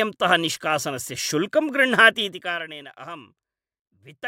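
A gain change between 2.22 and 2.62 s is applied in coarse steps with no smoothing, around a hundred per second, as the level drops by about 15 dB. This is zipper noise: each jump clicks, giving a fine buzzing tick over the speech during the fade.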